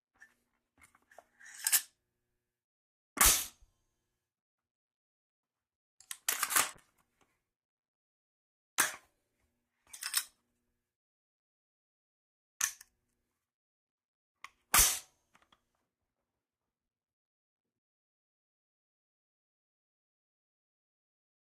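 From 6.74 to 13.45 s, a call bitrate drop sounds like a fall from about 64 to 17 kbps, coarsening the audio and trimming its high frequencies.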